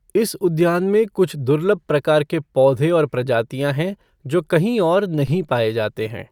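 A DC step hits this speech clip at 5.27 s: the waveform's zero line jumps by about -26 dBFS, as from a converter recalibrating or an offset input switching in. It registers as a single low thump, then drains away through a 5 Hz high-pass.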